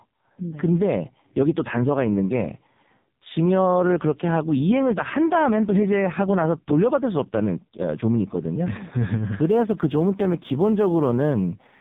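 From the start, the speech carries heavy AMR narrowband mobile codec damage: nothing above 3.8 kHz, and a buzzy, synthetic vocal-tract rendering consistent with the lowest 4.75 kbps mode. From 9.45 s to the end, sample clock jitter of a couple of microseconds makes sampling instants wander, adding hiss-like roughness about 45 dB below the signal on louder, brighter sounds.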